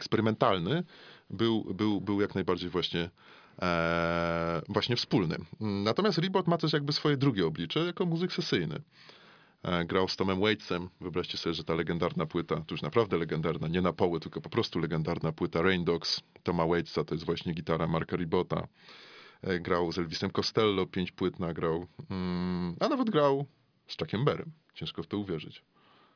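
Speech recording, no technical faults detected anywhere in it.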